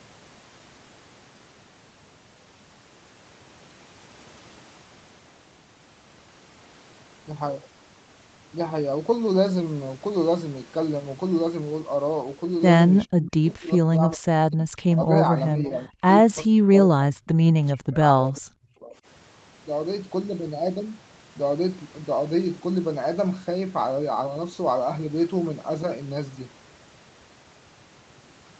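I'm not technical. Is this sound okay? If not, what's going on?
No, not quite. There are three separate problems.

The first is overdone noise removal, heard all the way through. A noise-cleaning tool was set too strong. The background drops and breaks up into twinkling, warbling specks. This differs from the later dropouts because it never lets up.

The second is speech suppressed in double talk, which is likely the cause of three stretches: 13.06 to 14.68 s, 15.52 to 16.05 s, and 16.47 to 18.95 s. Here the speech sinks steeply or breaks into pieces. This probably happened because both sides talked at once, and the call software turned this speaker down along with the echo. Unlike the steady warbling background, these are sudden, passing holes.

The third is an echo leak, likely behind a brief scrap at 15.65 to 15.7 s. A faint copy of the speech comes back about 0.4 seconds late, because the call's echo removal missed a bit of loudspeaker sound. 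Here something extra is added.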